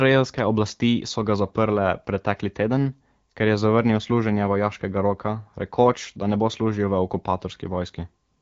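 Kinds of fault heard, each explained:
No faults are audible in this speech, which passes through an AMR wideband (HD Voice) coding path at 12.65 kbit/s with its content ending around 7.3 kHz.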